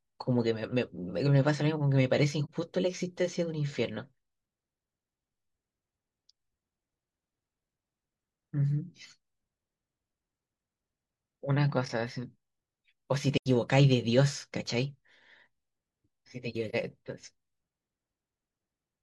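Speech, with three short dropouts from AAC frame loss with muting: around 2.45 to 2.50 s, 13.37 to 13.46 s, and 16.69 to 16.75 s. The first and last are about 43 ms gaps, which fits one lost frame each. The middle one runs about 85 ms, like two frames in a row. The decoder zeroed the missing spectrum, and the overlapping windows fade the sound out and back in, so you get soft-edged dips and holes.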